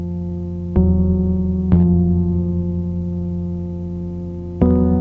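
Nothing goes wrong anywhere in this sound; it has just come through a call path that behaves as expected, with nothing above about 8 kHz, which fits a G.722 link at 64 kbps.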